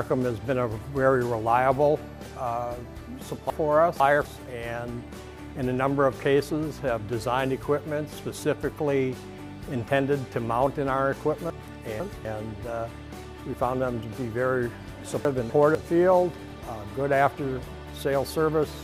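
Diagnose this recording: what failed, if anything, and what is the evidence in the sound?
Chunks out of order in buffering: at 3.5–4.25, 11.5–12.25 and 15.25–15.75 s, a 250 ms block plays late, causing jumbled sound.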